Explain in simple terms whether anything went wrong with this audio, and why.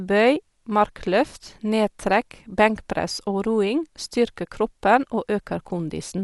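Something did go wrong, across the whole speech clip: it sounds dull and rough, with nothing above about 11.5 kHz. That's likely Dolby Digital compression squeezed too hard, dropping the top end and filling in missing detail with a grainy, fluttery noise.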